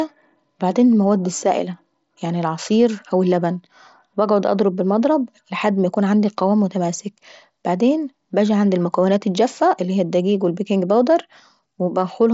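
Nothing stood out on listening to this speech clip; it carries the band-limited sound of an mSBC Bluetooth headset link, with nothing audible above about 7.6 kHz.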